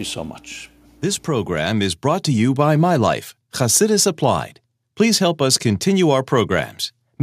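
From 1.24 to 2.56 s, automatic gain rising lifts the speech and background together by about 5 dB; the waveform envelope widens steadily and the spectrogram brightens uniformly.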